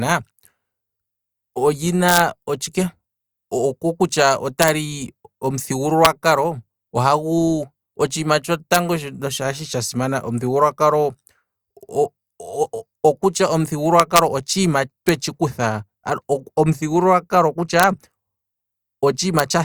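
Integer overflow cracks the speech at 2.09–2.20, 4.62–4.68 (after "oko kutya"), 6.05, 8.74 (after "ohagu otshiima"), 14.00–14.19, 15.09 (before "tshi kutha"), 17.80–17.84 and 19.39 s. Peaks reaching or exceeding full scale by up to about 1 dB wrap to the opposite sign instead of being limited, giving violent cracks far sharper than clipping.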